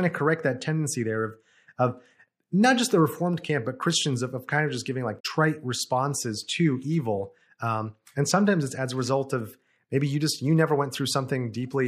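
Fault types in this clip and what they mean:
Damaged data in a compressed stream: a short disruption of about 70 ms breaks into the speech at 5.19 s, right after "of just giving like" and before "responses to evil". Part of the compressed stream was corrupted there, so the decoder misread those frames, lost its place in the bitstream and had to hunt for the next valid frame header before playback could resume cleanly.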